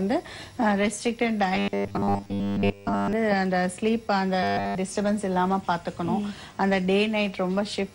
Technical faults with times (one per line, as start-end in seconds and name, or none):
1.55-3.13 robotic sound from repeated short buffers
4.43-4.75 robotic sound from repeated short buffers